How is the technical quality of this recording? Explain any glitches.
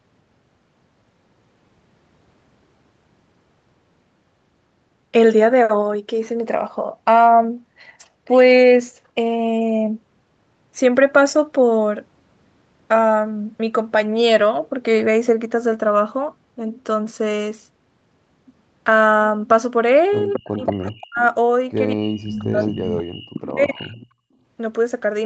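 The recording has trouble in its last few seconds, where an echo leak and speech suppressed in double talk overlap, heard through a call path whose sound stops at about 8 kHz.

Echo leak occurs at 20.33 to 20.92 s, 22.27 to 23.03 s, 23.34 to 23.53 s and 23.83 to 24.06 s. A far-end echo canceller likely failed to fully cancel its loudspeaker pickup, returning a copy of the speech delayed by 223 ms, roughly 10 to 20 dB below the voice.

Speech suppressed in double talk appears at 20.54 to 21.22 s, 21.94 to 23.29 s and 23.53 to 24.03 s. With both sides talking, the canceller likely could not separate the talker from the echo and attenuated both, so the voice drops sharply, by around 40 dB at worst, cutting out in pieces.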